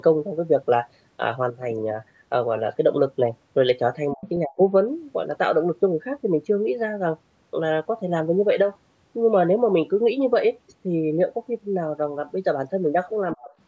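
Three short dropouts hit this speech recording: the sound collapses by something like 35 to 40 dB from 4.14 to 4.26 s, again from 4.45 to 4.59 s, and once more from 13.36 to 13.51 s, each gap lasting roughly a tenth of a second or a bit more. The likely cause is speech suppressed in double talk, where an echo canceller mistook the near talker for loudspeaker echo and ducked it. The call's microphone processing leaves nothing above 8 kHz.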